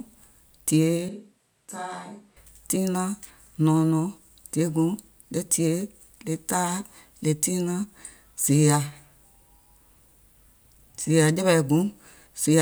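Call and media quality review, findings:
Switch to a distant microphone, 1.09 to 2.36 s. Speech turns abruptly roomy and hollow. Bass thins. Level drops roughly 10 dB. Room noise rises to about 35 dB below speech. Returns suddenly at 2.36 s. Component: capture path, likely a close-mic dropout with fallback to a far device mic. That mic hears room reflections, less low end, more ambience.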